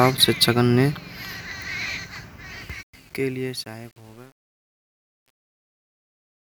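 Speech fading out from about 2.6 s shows truncation distortion on a fade from 2.61 s to the end. Worst from 3.03 to 6.53 s, the tail turns gritty, which fits a roughly 9-bit undithered gain stage.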